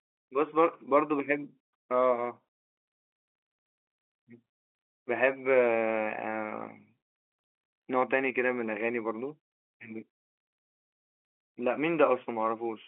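Nothing stood out on listening to this speech, which carries the narrow telephone band of G.711 coding, roughly 250 Hz to 3.4 kHz with nothing above 3.8 kHz.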